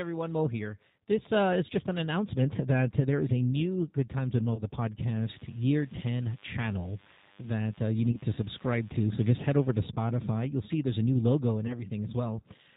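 G.729 codec coding runs through the whole of this 13-second speech recording, and its damage is plainly audible. The codec rebuilds the signal from a vocal-tract filter, a pitch predictor and a handful of pulses per short frame. Here that gives a band-limited sound with nothing above 4 kHz and a rough, slightly synthetic texture, which fits an 8 kbit/s G.729A stream.

VoIP packet loss concealed by the speech codec occurs at 4.55–4.62 s, 8.12–8.18 s, and 11.67–11.81 s just after "a new logo and". Each gap points to a single lost 20 ms packet. The decoder fills it by extending its last pitch and filter state at falling gain, which produces a brief smear of buzzy tone or coloured noise. Because every frame depends on the one before, the sound stays weakened and distorted for tens of milliseconds after the loss, so each disturbance outlasts the 20 ms that went missing.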